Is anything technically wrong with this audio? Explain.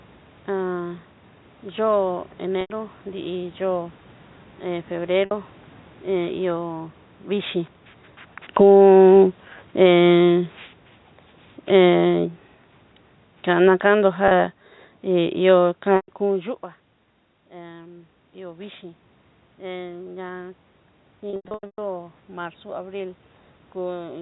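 Yes. Three kinds of fault are audible: packet loss with pitch repetition, automatic gain falling, and automatic gain rising.

Packet loss with pitch repetition occurs at 2.61 s (90 ms), 5.25 s (60 ms), 14.28 s (30 ms), 15.96 s (120 ms), and in a scattered burst from 21.3 to 21.78 s, where 360 ms goes missing over 480 ms and the longest run is 120 ms. The step sizes fit 30 ms packets. At each gap the receiver loops the last pitch period to fill it. The 30 to 90 ms gaps sound like a brief, buzzy held tone. The 120 ms runs fade toward silence before the sound cross-fades back in.

Automatic gain falling runs from 8.45 to 16.53 s. Over that span the gain control judges the input too loud, or its background too strong, and lowers its gain by about 12 dB. The level sinks slowly, and the background drops with it, which separates this from a natural change at the source. A talker movement near 7.5 s just before it and another near 16.0 s at its end also shift the level, but those are acoustic.

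Automatic gain rising appears twice. From 8.7 to 10.21 s, inside the falling stretch, the gain briefly lifts by about 4 dB, so the level swells for roughly a second and a half before the downward trend resumes. From 17.5 to 24.17 s the input drops by about 17 dB and the control compensates with about 6 dB of gain. The sound and room noise swell together over several seconds, but the level still ends well below where it started.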